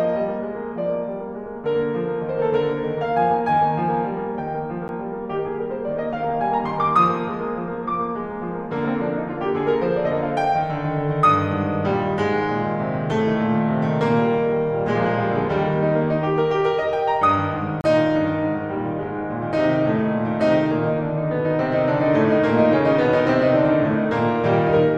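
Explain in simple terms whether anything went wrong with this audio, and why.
Two spots in the music drop out briefly, and both are a block of digital silence: a stretch of the sound replaced with silence. At 4.88 s the gap is only 10 ms, so it comes across as a quick tick. At 17.81 to 17.84 s it lasts 30 ms, long enough to hear as a tiny hole. The sound cuts off and comes back without any fade.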